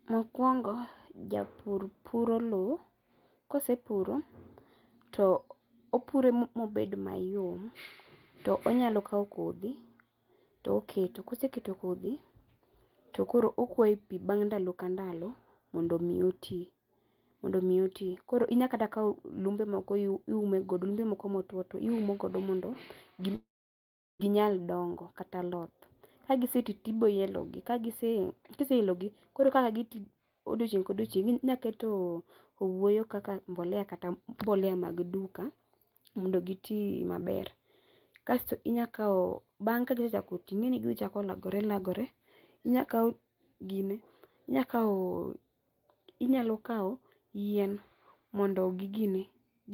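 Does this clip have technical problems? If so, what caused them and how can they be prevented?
Yes. At 23.35 s the speech turns into a fading buzz or hiss, then about 0.73 s of silence, resuming at 24.22 s with 0.84 s lost. This is likely a long network dropout. A more stable connection with redundancy or retransmission would prevent it.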